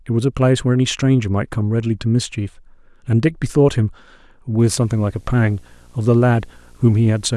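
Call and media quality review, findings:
Video or display buzz, 4.60 s to end: screen or video cable coupling into the audio path. Buzz at the 59.94 Hz field rate with hash above it, sitting low, well under the speech, persisting through the clip's final seconds.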